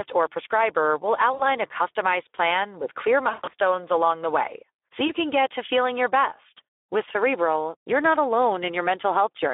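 The whole thing runs through the Speex codec, and you can plainly hear it: hoarse, grainy speech squeezed into a phone band of roughly 300 Hz to 3.6 kHz. The excitation sounds starved of bits, which fits a low setting around 11 kbps.

On top of that there's VoIP packet loss concealed by the speech codec. Right after "or prescriber will", from 1.33 to 1.48 s, about 60 ms is missing, and the decoder smears the last sound into a fading buzz or coloured noise. After "customized plan with clear", from 3.29 to 3.54 s, the dropouts are scattered over about 240 ms, with a longest gap near 140 ms, so the speech goes weak and distorted until "along the way so". A short 20 ms hiccup at 5.07 to 5.10 s, just before "can get to feeling", leaves a brief smeared blip.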